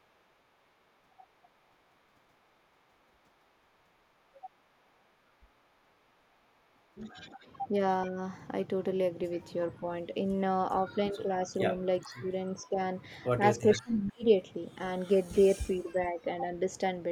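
At 4.85 s a faint echo leak appears. It is a delayed copy of the speech, about 40 dB below it, trailing by 428 ms. The likely cause is a loudspeaker on the far end whose echo canceller let some of its microphone pickup through.

From 8.07 to 8.18 s and again from 9.77 to 10.16 s, the speech dips by about 10 dB. This is speech suppressed in double talk. Both sides were likely talking at once, and the canceller turned the talker down along with the echo.

From 10.86 to 12.79 s the suppression returns, deeper at about 15 dB. Roughly a second of that span sounds ducked. Inside it, at 12.03 s, the echo leaks again at about 25 dB below the speech.

From 13.37 to 14.79 s comes the worst dip, about 35 dB. The speech nearly drops out in pieces. At 13.72 s the echo is louder still, about 15 dB down, with the same 428 ms delay.

From 15.37 to 16.73 s a milder dip of about 10 dB follows.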